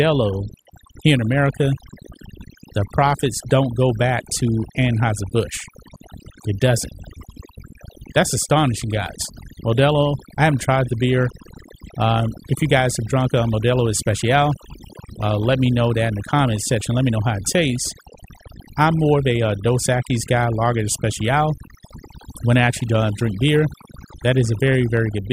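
Right from the start and running the whole way through, you've got overdone noise removal on this speech. Someone pushed a noise reduction tool much too hard: any frequency band sitting close to what it thought was noise got pulled way down or shut off, and the softer bits of the voice got caught in that too. So the background in the gaps drops away and breaks up into little twinkly specks.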